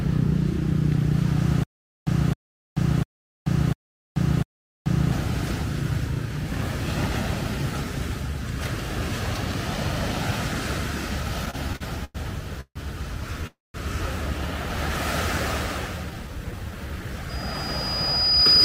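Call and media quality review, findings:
Stutter with silent gaps, 1.63–5.12 s. Player or stream likely stalled, replaying its last fragment on each retry. Audible as a 264 ms burst returning five times, every 698 ms, with 434 ms of digital silence between. Audio due in those gaps is lost.

Repeated stalls (stutter), 11.45–12.17 s. Packets arriving late, jitter buffer emptying six times. Receiver stretches the last sound to cover 213 ms, the longest gap 102 ms, about 30% of the span. Nothing missing, but the sound drags and stutters.

Call audio freeze, 12.61–12.77 s. Packets held in transit, likely buffer underrun. 149 ms of concealment, the last sound extended, then fading to about 60 ms of silence. Playback resumes where it stopped, now running 149 ms later.

Call audio freeze, 13.47–13.76 s. Likely the same failure, longer hold. 273 ms filled, including about 190 ms silent after the fade. 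Audio resumes intact, with total delay increased by another 273 ms.

Jitter buffer slow-down, 16.11–17.14 s. Buffer rebuilding its reserve by repeating single pitch periods and bits of pauses. 92 ms added, so playback runs at 92% speed with pitch unchanged. Sounds drawn out.

Loudspeaker feedback squeal, 17.29 s to end. Mic-to-speaker loop gain exceeds one at 4.9 kHz. A single tone swells over roughly a second, reaching about 10 dB above the signal, and persists until the clip ends.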